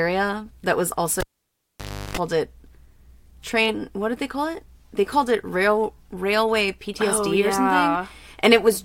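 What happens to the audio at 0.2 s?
Nothing goes wrong at 0.2 s; the audio plays through that moment intact, with no dropout, click or distortion.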